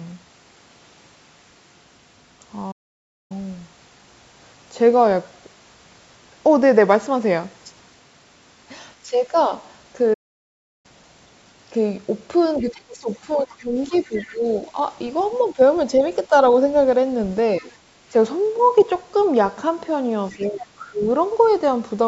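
A playback stall at 2.71 s cuts the speech dead for 0.58 s, and a second one at 10.13 s silences it for 0.70 s. The player most likely ran short of buffered data or had its thread blocked, so output went quiet until it recovered and then resumed.

Speech suppressed in double talk appears first from 9.05 to 9.51 s, where the talker's level dips by roughly 10 dB. The echo canceller most likely could not tell its own talker from the loudspeaker echo while both sides spoke, so it pulled everything down.

The other side's voice leaking through begins at 12.6 s and runs to 15.44 s, sitting roughly 25 dB below the talker. This is most likely loudspeaker sound that the echo canceller failed to fully strip from the microphone, and it comes through faint.

Across 12.62 to 16.31 s, the talker's own speech is suppressed heavily, dropping by as much as about 20 dB, with affected stretches totalling around a second and a half. 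A brief dip of about 10 dB follows at 17.6 s.

The leak returns from 18.57 to 19.27 s at a similar low level. It then appears as a short scrap from 20.32 to 20.49 s. Over 20.32 to 21.08 s, the talker is ducked by about 15 dB again. A final faint fragment of the far voice surfaces at 21.43 s.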